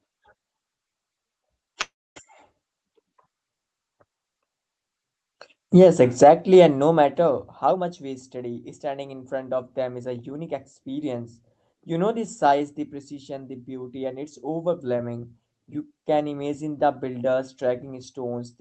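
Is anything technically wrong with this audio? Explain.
Yes. There are two kinds of fault in this speech.

A call audio freeze runs from 1.81 to 2.18 s. Packets were likely delayed and the jitter buffer emptied. The last sound smears into a fading tail, then about 260 ms of silence, and the speech resumes without loss.

Jitter buffer speed-up occurs from 7.64 to 11.06 s and from 12.17 to 12.72 s. The buffer had built up excess audio, so the receiver repeatedly removed pitch-period slices, roughly 300 ms and 40 ms in total. The speech plays at 109% and 106% speed at unchanged pitch and sounds hurried.

The Opus call path is audible as coding noise and a top end limited to 8 kHz, consistent with about 20 kbps.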